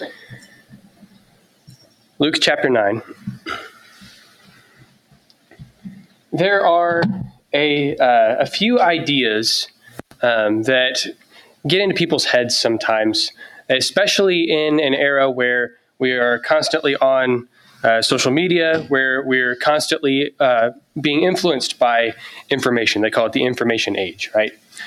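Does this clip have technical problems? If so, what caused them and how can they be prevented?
Yes. A noise suppressor designed for speech was left active on this audio. It mistakes steady and decaying sound for noise, so levels swing by roughly 15 dB and the sound pumps and thins. To prevent it, disable or bypass speech noise suppression whenever the source is not speech.

The same processing produced sound cut by the noise suppressor at 0.1–7.53 s, 9.68–11.65 s, 13.31–13.69 s, 15.7–17.84 s, 20.31–22.51 s and 24.51–24.77 s. Held and fading parts sink by about 15 to 18 dB while sudden onsets come through. To prevent this, use a music or original-sound mode, or turn suppression off for this material.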